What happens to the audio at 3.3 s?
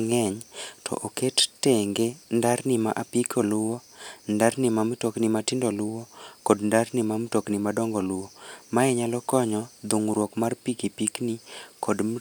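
Nothing goes wrong at 3.3 s; the speech carries straight through that moment with no dropout, click, distortion or other fault.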